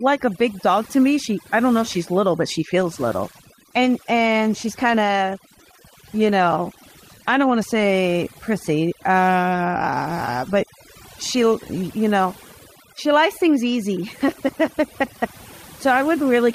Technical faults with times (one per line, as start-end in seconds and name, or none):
0.00-16.55 overdone noise removal
2.80-8.79 call bitrate drop